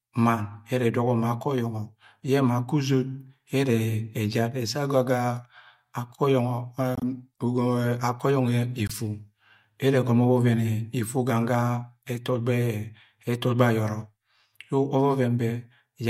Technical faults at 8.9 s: corrupt frame muted

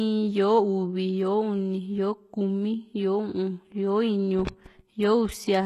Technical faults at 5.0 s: HE-AAC compression

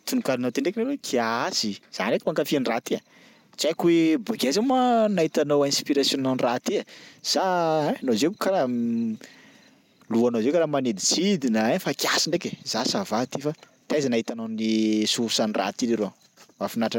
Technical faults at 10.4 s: none

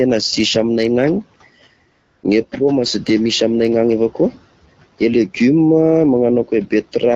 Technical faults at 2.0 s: AMR comfort noise

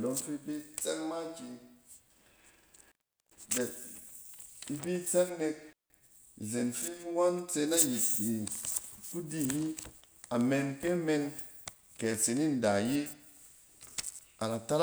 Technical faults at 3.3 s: intermittent contact

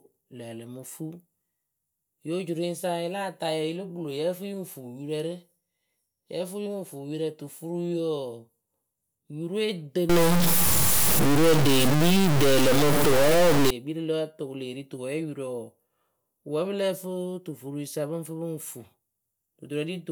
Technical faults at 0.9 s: none

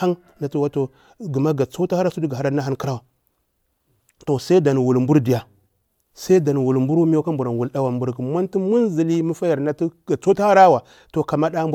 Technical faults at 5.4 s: none

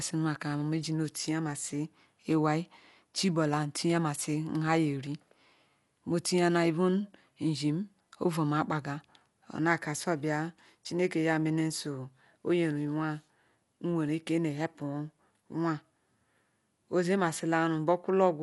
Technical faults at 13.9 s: Dolby Digital compression

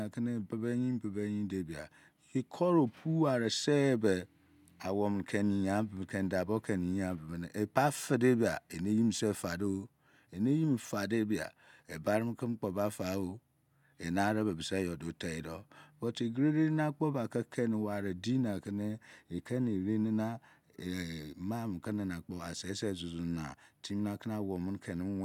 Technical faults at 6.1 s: none

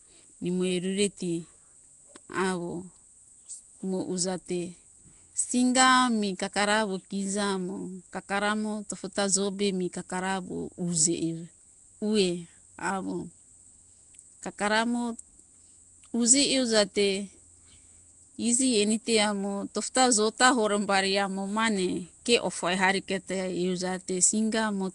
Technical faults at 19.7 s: Nellymoser compression

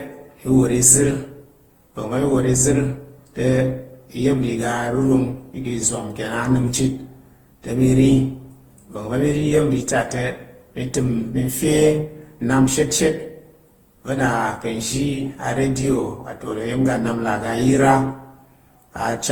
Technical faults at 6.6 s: generation loss

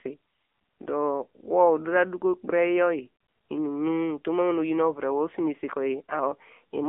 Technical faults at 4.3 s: AMR narrowband mobile codec

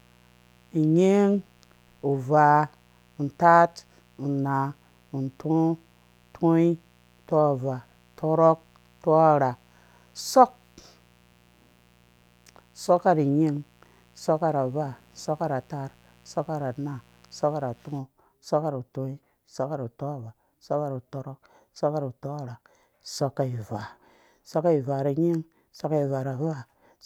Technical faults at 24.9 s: none

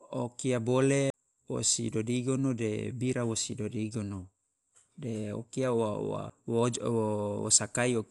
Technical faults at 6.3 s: Dolby Digital compression; CD skip

